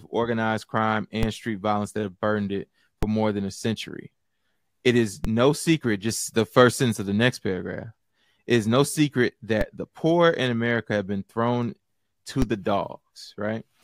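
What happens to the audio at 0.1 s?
Nothing goes wrong at 0.1 s; the audio is intact there.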